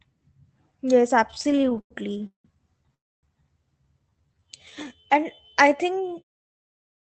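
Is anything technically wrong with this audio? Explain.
Yes. Three network-timing faults affect this speech, heard through a call path whose top end stops near 8 kHz.

From 1.31 to 2.46 s there are repeated stalls (stutter). The jitter buffer kept running dry, about 17 times, and each time the receiver stretched the last sound. The longest hold was 180 ms, and about 38% of that stretch is filler. Nothing is lost, but the speech jerks and drags. Unlike a single freeze, these are many short, closely spaced catches.

From 2.94 to 3.25 s there is a call audio freeze. Packets were likely held up in transit, so the buffer emptied once. The last sound is carried on briefly, then about 0.27 s of near-silence follows before speech resumes where it stopped. It is one longer hole, not a chain of stutters.

From 4.09 to 6.41 s there is a jitter buffer slow-down. To rebuild its reserve, the receiver repeated single pitch periods and bits of pauses, adding 336 ms. 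Speech runs at 86% speed with unchanged pitch, drawn out rather than broken by gaps. The clip's ending fade-out, from about 6 s to 6.24 s, falls within this stretch.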